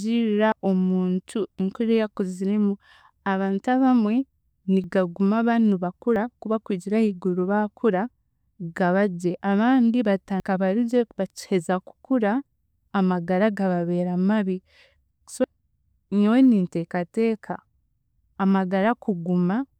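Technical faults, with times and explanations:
0.52, 4.84, 6.16, 10.4 and 15.44 s: likely dropped buffer (overrun). The speech jumps forward with no silent gap, losing roughly 40 to 100 ms, the most just before "bari gye bakiheza kukura".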